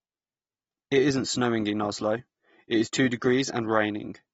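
Throughout, the speech sounds dull and smeared, with nothing above 7.6 kHz. This is likely AAC compression at a low bitrate near 29 kbps, which lowers the cut-off.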